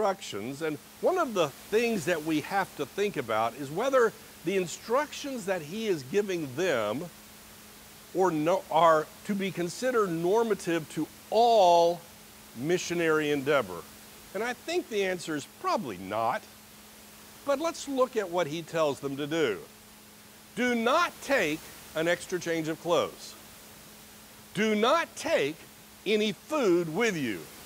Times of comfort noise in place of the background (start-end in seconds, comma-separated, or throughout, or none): none